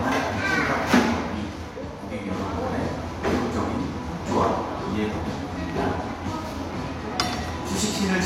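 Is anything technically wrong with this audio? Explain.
Yes, there is a single loud pop from 5.70 to 5.72 s. A sudden voltage step, likely from a plug, switch, static discharge or driver glitch, entered the signal and was shaped by the following circuitry. It sounds like a short, sharp pop a few decibels above the surrounding audio, which carries on underneath.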